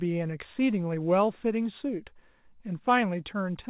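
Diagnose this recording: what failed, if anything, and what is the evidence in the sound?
Nothing failed; the call path carries the speech normally.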